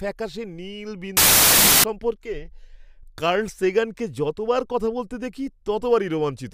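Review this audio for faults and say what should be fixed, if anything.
From 1.17 s to 1.84 s the speech turns into loud, harsh noise with a slowed, octave-lowered version of the original buried inside it. This is a wrong sample width fault. The sound points to 32-bit integer data being read as 16-bit. Each real sample gets split into two values, so the segment plays at half speed. Only the values built from the high bytes carry the true signal, and the low bytes produce the dense noise. The sample format should be declared and checked at every read and write boundary so that reader and writer always agree on bytes per sample.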